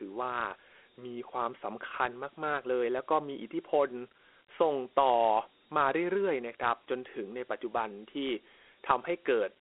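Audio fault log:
Throughout, Dialogic VOX ADPCM: the speech passes through a 300 Hz to 3.4 kHz telephone band and a coarse 4-bit adaptive coder whose 32 kbps rate fits 8,000 samples a second, so nothing reaches above 3.9 kHz and a plainly audible gritty hiss rides on the voice.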